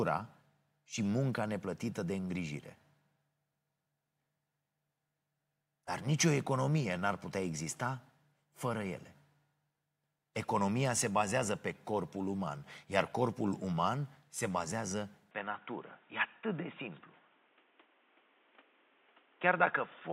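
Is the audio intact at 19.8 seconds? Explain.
No. At 19.8 seconds the speech sounds dull and boxy, with nothing above 3.7 kHz and a faint new background noise well below the voice, while the level stays about the same. This runs from 15.31 seconds to the end of the clip, starting abruptly with no gap. The likely cause is an input switched to a poorer device, such as another microphone or a headset's call profile, which passes a narrower band and adds its own noise floor.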